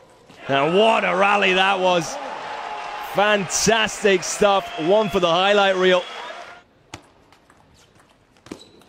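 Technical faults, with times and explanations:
No technical faults detected.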